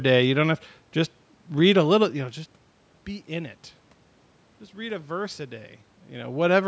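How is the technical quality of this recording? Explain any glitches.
The recording's technical quality shows no glitches to explain, with only the call's normal microphone filtering, some room noise and a talker shifting position around 2 and 6 seconds.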